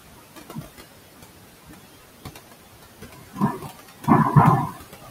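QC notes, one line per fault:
Throughout, noise suppressor artifacts: The suppressor pulls down every frequency band it judges to be steady background, by about 20 dB, deciding afresh on each short frame. The room noise, which sits about 12 dB below the speech, drops away in the gaps and comes back up under the speech.
0.45–0.62 s, 1.65–1.77 s, 3.14–3.71 s and 4.62–5.10 s, speech cut by the noise suppressor: In each of these spans the suppressor mistakes part of the speech for background and turns it down with the noise, by about 21 dB at its deepest (about 18 dB in the third span). Roughly a tenth to a third of a second of speech is affected per span. Soft consonants and trailing sounds there come out faint or swallowed.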